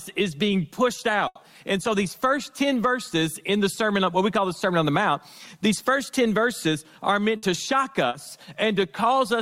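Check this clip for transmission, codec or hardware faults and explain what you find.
There are three transmission dropouts: two bursts of packet loss and one short concealed packet loss.

Burst of packet loss, 1.27–1.41 s and 7.37–7.45 s: runs of packets were lost or arrived too late, so the receiver stretched the last sound for 80 ms and 60 ms while fading it. You hear a held buzz or hiss, then the audio jumps ahead with that stretch missing.

Short concealed packet loss, 8.09–8.15 s: about 40 ms never reached the decoder in time, so the receiver patched the hole by continuing the preceding sound and blending back in. It's a quick smear or wobble, and a brief sound there could drop out.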